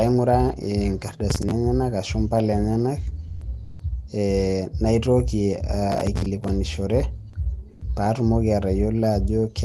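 Speech carried over a call link in which Opus coding can be heard, shows two bursts of processor overload crackle at 1.30–1.52 s and 5.92–6.49 s. Stale scraps of old audio with hard edges repeat at a rate that suggests buffers of about 10 ms, a handful missed in the first burst and around fifteen in the second. That gritty, repeating texture sets it apart from network loss, which is usually concealed more smoothly. At 3.27–3.41 s the sound is dropped by the voice detector for 140 ms, likely through Opus DTX: speech gives way to comfort noise rather than stuttering, then returns. Comfort noise replaces the background at 3.63–3.79 s (about 3 dB quieter) and at 7.73–7.81 s (about 3 dB louder). Here only the ambience turns flat and featureless, with no speech lost, which distinguishes it from the detector dropout.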